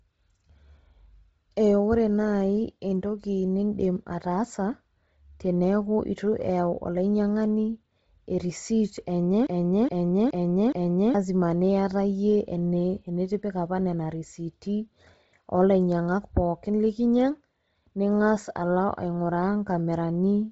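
Right from the start the whole clip has a heavy codec sheen. Nothing comes through above about 7.7 kHz, and the speech carries that breathy, grainy edge you get when the upper band is thrown away and patched with noise. That points to Bluetooth LC3 compression as the likely cause, and a pretty starved one, since the damage fits something around 24 kbps with short 7.5 ms frames.

Then from 9.47 s to 11.14 s there's a broken-record loop. A chunk of about 0.42 s plays four times back to back, identical each pass, so it has that stuck, stuttering feel. Most likely the player or stream stalled and kept resending the last fragment it had buffered. Whatever should have been heard in those seconds is simply gone.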